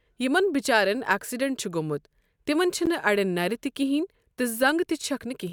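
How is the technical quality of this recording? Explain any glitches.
One glitch stands out: a brief dropout in the speech at 2.86 s, a gap at a join of encoded pieces. The recording appears to have been encoded in separate pieces, with joins every 4 s, and spliced without trimming, so the encoder's start-up delay and end-of-piece padding remain as a silence of about 12 ms. It sounds like a brief break in the speech before the speech resumes exactly where it stopped. On a waveform it shows as a short flat stretch or deep dip with smeared edges. On a spectrogram it appears as a thin vertical blank band across all frequencies, its edges slightly smeared by the codec.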